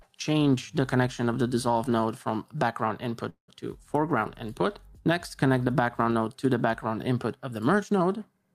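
From 3.29 to 3.50 s, a fading buzz then 120 ms of silence: a call audio freeze, likely delayed packets emptying the jitter buffer.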